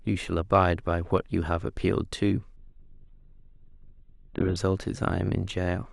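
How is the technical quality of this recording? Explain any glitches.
The recording has one clear fault, a two-second stretch where the quality suddenly degrades. From 2.56 s to 4.56 s the adaptive stream drops to a lower bitrate: the connection slowed, so the player switched to a leaner encode. Nothing is heard above 4.2 kHz, and the speech turns dull, which points to something like Opus falling from about 64 kbit/s to around 8 kbit/s. Unlike packet loss or a dropout, the switch is instant in both directions and leaves no gap or stutter.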